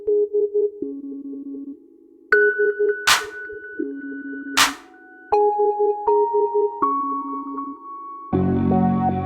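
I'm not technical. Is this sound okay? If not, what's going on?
Yes, this bit of music sounds fine, with nothing going wrong in it that you'd need to worry about.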